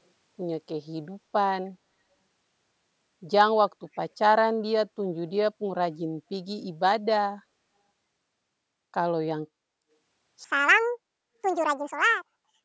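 From 3.93 to 3.97 s, an echo leak appears. The far end was likely playing the call over a loudspeaker, and its echo canceller failed to fully remove what its microphone picked up, so a fragment was sent back. It arrives about 307 ms after the original sound as a brief, very faint scrap, far below the main speech. The call microphone processing, meanwhile, limits the audio to nothing above 8 kHz.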